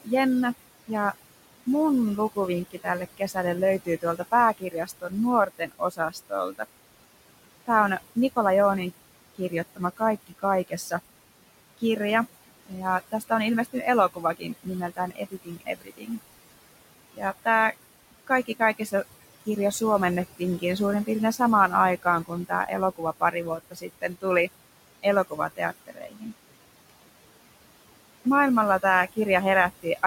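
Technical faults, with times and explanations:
Throughout, low bit depth without dither: a grainy distortion rides on the speech and changes with it, coarsest on soft syllables and decays, where the quietest parts sputter or fall to silence. The likely cause is rounding to about 6 bits with no dither, so the error tracks the signal at roughly 20 dB below it. On a waveform, quiet stretches show visible stair-steps. A spectrogram shows broadband hash that appears and vanishes with the speech rather than a steady floor.
Throughout, noise suppressor artifacts: the suppressor cuts what it judges to be steady noise by about 20 dB, frame by frame. The room noise, which sits about 15 dB under the speech, sinks in the gaps and swells back beneath each phrase. On a spectrogram the background between phrases looks patchy and blotchy, with isolated flickering time-frequency cells instead of an even haze.
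0.01–6.66 s, 7.66–16.19 s, 17.14–26.91 s, 27.97–29.98 s, speech cut by the noise suppressor: in each span the suppressor mistakes parts of the speech for noise and pulls them down by as much as 21 to 22 dB. The affected portions add up to roughly 1.5 s, 2 s, 2 s and a tenth of a second. Soft consonants and word endings sound swallowed. On a spectrogram, high-frequency consonant energy is notched out, and the waveform shows sudden dips inside phrases.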